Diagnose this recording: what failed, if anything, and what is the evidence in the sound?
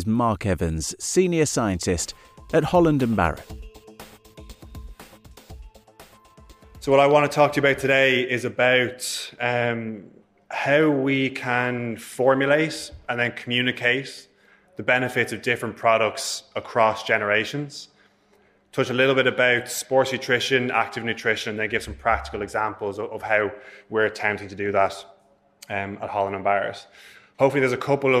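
Nothing failed here as far as the ear can tell: there's no stage in the chain leaving a mark on the sound, so there's no evidence to point to and nothing to chase down.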